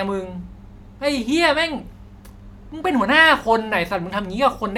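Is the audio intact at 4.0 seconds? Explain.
Yes, at 4.0 seconds the speech is intact, with no dropout, click, distortion or other fault at that moment.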